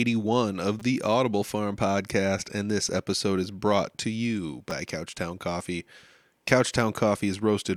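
In this speech clip, twice new audio failed to reach the output in time and the device replayed its last buffer, a repeated-buffer fault. At 0.80 to 0.82 s a 5 ms piece plays four extra times, and at 4.71 s, just after "is brought to you", twice more, each heard as a brief buzzy click.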